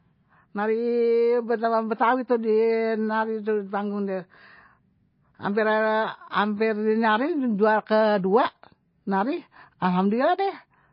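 From start to finish the speech carries plainly audible damage of the kind MP3 compression leaves, likely from an encoder starved of bits, at a rate that fits roughly 24 kbps. Nothing survives above 5.6 kHz, so s sounds lose their hiss. Unlike a simple low-pass filter, which only dulls the top, weak frequency lines here flicker in and out between frames, giving a watery, swirling texture, chirpy sibilants and smeared consonant onsets.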